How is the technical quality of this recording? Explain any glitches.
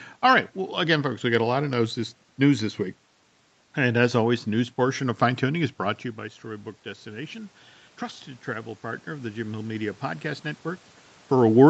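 The one glitch is an automatic gain rise between 6.15 and 10.52 s. Around 5.5 s the level reaching the microphone falls by about 15 dB, as though the talker leaned away, and the automatic gain control slowly raises its gain by about 8 dB to compensate. Over those four seconds the voice and the room noise behind it swell together. The voice does not fully return to its earlier level, because the gain only recovers part of the drop.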